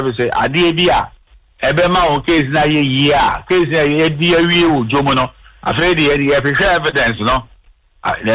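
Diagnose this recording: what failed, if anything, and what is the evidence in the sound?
Clock drift between sender and receiver sits at the buffer stage of the call. The sending device's clock runs slow, by something like two percent, so the receiver's jitter buffer keeps running short and has to be topped up. This differs from ordinary network jitter because the adjustments never reverse. Every correction across the clip pushes the same way, which points to a persistent rate mismatch rather than random packet timing.

The repeated timing corrections are how that drift becomes audible. From 0.03 s to 8.33 s the receiver stretches the sound by repeating short pieces, so the effective playback speed is 99 percent and roughly a tenth of a second is added overall. Pitch does not shift the way it would with a resampling or wow fault, because the material is lengthened piece by piece rather than slowed.

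A short stall from a late packet occurs at 6.90–6.95 s. The buffer ran empty, and the receiver held the last sound for 25 ms until the packet arrived, then resumed from the same point. Nothing is skipped, and the delay grows by 25 ms from then on. That sets it apart from packet-loss concealment, which would paper over missing material. Within the G.711 mu-law path, which stops at 4 kHz, it shows as a brief held moment.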